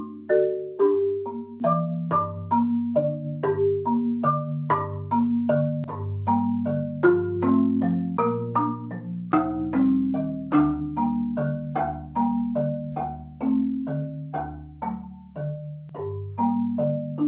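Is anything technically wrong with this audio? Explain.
No, nothing is technically wrong here: the audio comes through an ordinary call path whose telephone-band coding leaves nothing above 4 kHz, and no fault can be heard anywhere in it.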